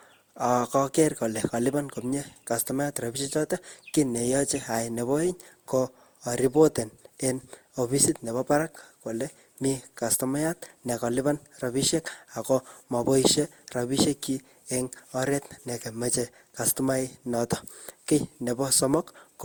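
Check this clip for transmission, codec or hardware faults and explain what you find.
The speech shows one fault, present for the whole clip: generation loss. The cause is likely repeated lossy coding, with the audio decoded and re-encoded around seven times through an Opus-style codec at a rate that fits roughly 64 kbit/s. Each pass quantises again on a shifted frame grid, so coding noise accumulates. Bandwidth still reaches about 20.1 kHz, yet the speech sounds swirly, hollow and smeared, with consonant onsets blurred.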